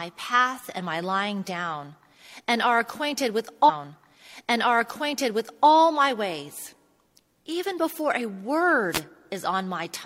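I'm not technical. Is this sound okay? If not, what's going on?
No. At 3.65 seconds, just after "and are acquainted with", about two seconds of the speech play a second time, with a small blip where it jumps back. The normal flow returns at 5.65 seconds with "my ways". This is a stream segment repeated: the player fetched or queued the same chunk of the broadcast twice and played both copies back to back, so the listener hears that stretch again.

Near the end, from 8.91 to 9.01 seconds, a short burst of static, like a quick swish, cuts across the speech for about a tenth of a second. This is a wireless microphone noise hit. The radio link from a wireless microphone briefly weakened as reflected signals cancelled each other out. The receiver's own hiss rose up and momentarily covered the voice before the signal recovered.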